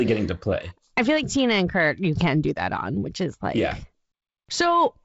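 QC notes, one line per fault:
Nothing stood out on listening to this speech clip, which comes across as ordinary G.722 wideband telephone audio.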